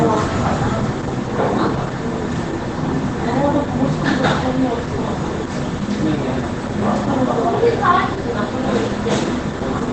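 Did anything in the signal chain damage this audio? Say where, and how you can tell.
Yes, at the codec stage: heavy Opus compression throughout, nothing above 9.1 kHz, muffled and hoarse, likely from a low-rate speech-mode encode around 12 kbps.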